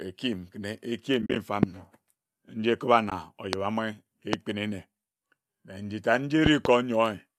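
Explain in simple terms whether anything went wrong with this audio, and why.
AAC frame loss with muting hits at 1.22 to 1.36 s and briefly at 3.10 s. Chunks of the compressed stream went missing, and the player filled them with silence, leaving soft-edged gaps.

Loud pops jump out at about 1.63, 3.53 and 4.33 s, and a pair sits between 6.46 and 6.68 s, just after "na njitad nji". Each is a sharp burst on top of the speech, which keeps going underneath. The likely cause is an electrical jolt, such as a plug, switch or static discharge, entering the signal.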